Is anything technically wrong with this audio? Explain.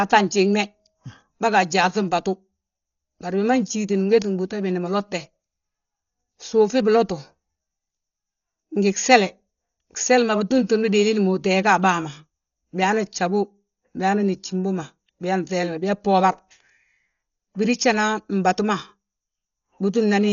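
Yes. Throughout, the speech sounds dull with nothing above 6.9 kHz and rough, fluttery noise, likely Dolby Digital compression starved of bits, as at 40 kbps, with the gaps filled by dither.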